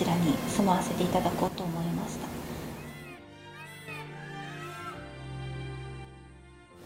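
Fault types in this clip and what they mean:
One channel drops out: from 1.48 to 3.88 s, and again from 6.05 s to the end, the level falls abruptly by about 6 dB, then recovers after the first dip, most likely because one stereo channel went silent, halving what remains after mono summing.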